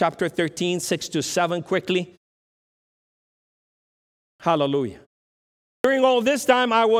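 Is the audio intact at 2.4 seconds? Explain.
Yes, the speech at 2.4 seconds plays through cleanly, with no dropout, click, distortion or other fault at that moment.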